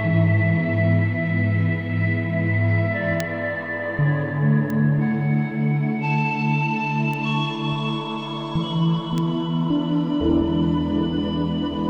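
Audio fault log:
3.20 s, 4.70 s, 7.14 s and 9.18 s: bit error spike. Each is a single sharp tick where one flipped bit briefly throws the sample value up by a power of two before it snaps back, so it bears no relation to the surrounding sound. The first, at about -8 dBFS, is the loudest; the other three reach about -14 dBFS. On the waveform each is a lone needle lasting a sample or a few in a row. On the spectrogram each is a thin vertical line spanning the whole frequency range.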